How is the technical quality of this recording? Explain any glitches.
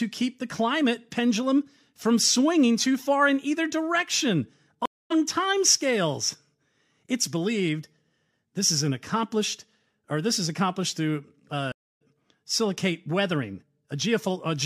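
The recording has two interruptions caused by a stream reconnect. At 4.86 to 5.12 s and again at 11.72 to 12.02 s, the network connection dropped, so the player stopped receiving data, reconnected and started a new decoder partway through the live stream. Each time the speech goes silent, for 0.25 s and then 0.29 s. When it comes back, it picks up at a later point, roughly 0.3 s on the first time and about 0.2 s on the second, so a short stretch of speech is skipped.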